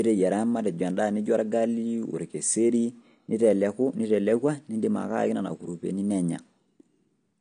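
Throughout the speech, the signal has likely been through AAC compression. The codec damage fits AAC-LC running at a low bitrate of around 32 kbps. With so few bits available, the encoder throws away the top of the spectrum entirely and quantises the remaining frequency bands coarsely, so nothing reaches above about 9.9 kHz. The damage is plainly audible: the speech sounds dull and smeared, with a warbling, fizzy texture on sibilants and sustained sounds.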